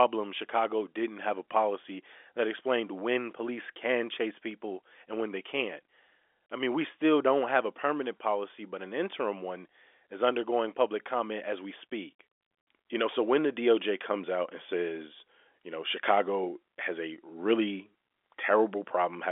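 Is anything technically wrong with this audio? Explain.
No, nothing here is technically wrong. The speech has the narrow character of G.711 telephone coding, with the band limited to about 300 Hz to 3.5 kHz and at most a faint trace of the format's level-following quantisation hiss beneath it.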